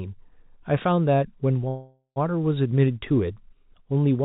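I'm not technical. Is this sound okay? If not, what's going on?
No. From 1.68 to 2.18 s there is a call audio freeze: the sound stalls into a fading buzz or hiss, briefly near-silent, then resumes where it left off. This is likely from delayed network packets. Nothing is lost, but everything after runs about half a second late.

From 2.66 to 4.16 s there are periodic USB or driver dropouts: about four ticks, one every 0.5 s. Each is a tiny skip, a fraction of a millisecond, caused by the computer's audio connection briefly stalling at a regular interval.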